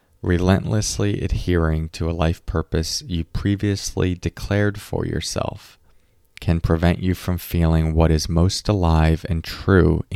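No technical faults are audible.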